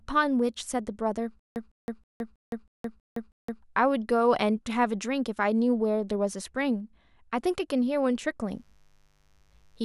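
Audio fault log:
1.39–3.63 s, stutter with silent gaps: A 156 ms fragment of the speech plays, then drops to 165 ms of digital silence, repeating seven times at an even 321 ms period. This is likely a stalled player or stream replaying its last buffered fragment at each retry, then running dry. The speech that belonged in this span never arrives. On the waveform, identical blocks alternate with flat silent gaps. The spectrogram shows matching vertical slices separated by blank columns.
8.52–9.85 s, mains buzz: A steady, raspy buzz enters under the speech and runs to the end, sitting roughly 40 dB below it. Sharp switching spikes repeating twice per 50 Hz cycle produce a dense series of harmonics stacked on 50 Hz and climbing into the kilohertz range. That wide harmonic spread is why it sounds gritty rather than like a clean hum. On a spectrogram it appears as evenly spaced horizontal lines reaching high up. 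The waveform shows a faint periodic spiky floor.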